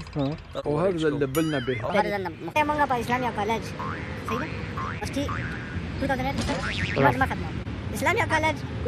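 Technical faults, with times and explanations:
1.90–8.88 s, wrong sample rate: from 1.90 s to the end, the sound runs about 1.38 times faster and sits roughly 5.55 semitones higher, with tempo and pitch shifting together by the same ratio. That pairing means the samples were played back faster than they were captured, with no conversion between the two rates. The ratio fits material recorded at 32 kHz being played at 44.1 kHz, so everything comes out hurried and pitched up.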